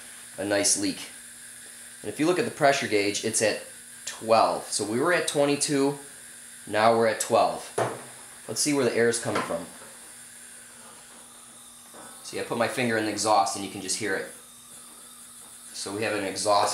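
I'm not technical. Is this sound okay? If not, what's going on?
Yes, nothing wrong can be heard anywhere in this recording.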